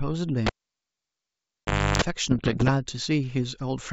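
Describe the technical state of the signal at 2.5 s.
At 2.5 s the speech is inside a burst of bit errors on an ADPCM link, running from about 2.31 to 2.71 s on a G.722 wideband path whose upper band, with its light hiss, is audible around it. The density of damage suggests an error rate of around one percent. Each flipped bit throws off the decoder's step size and predictor, so the error rings on for several milliseconds, producing pops, rough grainy bursts and brief jumps in level.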